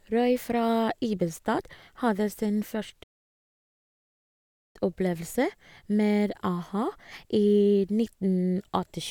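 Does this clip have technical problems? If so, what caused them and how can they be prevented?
Yes. The player was likely starved of data or had its output thread blocked, so nothing reached the output and the speech cuts off just after "hadde sin" at 3.03 s. This playback stall leaves about 1.72 s of dead silence, until 4.76 s, before the sound picks up again, a gap that interrupts the flow mid-phrase. Preventing it means giving the player a larger buffer and keeping its audio thread free of blocking work.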